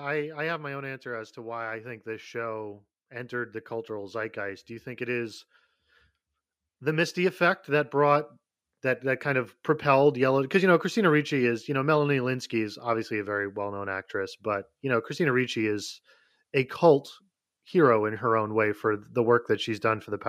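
At 1.03 s the level starts climbing, and by 5.45 s it's come up by about 8 dB. That's automatic gain rising: the AGC decided the input was too quiet and kept nudging its gain up. It's a slow swell, not a jump, and the background rises right along with the speech. The same thing happens again from 6.79 to 9.59 s, this time a gentler lift of about 4 dB.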